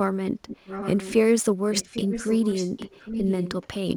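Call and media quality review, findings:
Sample clock jitter, throughout: faint hiss and roughness riding on louder, brighter speech, gone in pauses. Converter clock instability, around 3 µs rms, shifts sample instants; error scales with waveform slope, sitting roughly 30 dB below the signal.

Echo leak, 0.47 to 1.14 s: a delayed, fainter second copy of the speech trailing behind it. Likely far-end loudspeaker pickup not fully removed by the echo canceller, returned 805 ms late, roughly 10 dB down.

Echo leak, 1.71 to 3.67 s: the same trailing copy for a longer stretch, 805 ms behind, about 10 dB below the speech. Likely the same residual echo path leaking through the far-end canceller.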